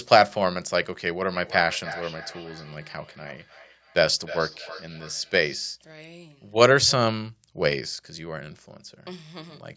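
From 1.23 to 5.67 s there is feedback echo between two devices. A second device in the room replays the speech, and this microphone picks it up again. Each echo returns after roughly a third of a second, reaching about 17 dB below the speech, thin and ringing.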